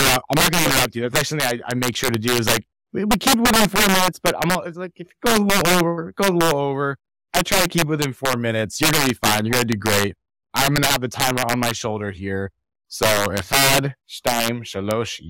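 Integer overflow runs throughout the speech: gain about 10 dB too high wraps a few percent of peaks to the opposite sign, producing sharp, violent cracks on loud syllables.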